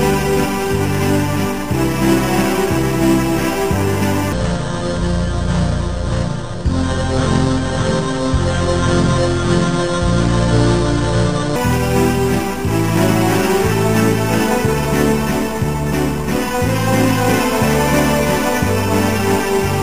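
From 4.33 s to 11.56 s the sound drops deep and drags, slowed to 0.594 times its proper speed, with pitch falling about ten semitones. This is a section at the wrong speed, likely from playback or editing locked to a mismatched clock.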